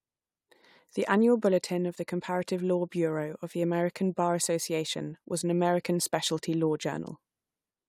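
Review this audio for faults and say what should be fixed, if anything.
No faults found; nothing needs fixing.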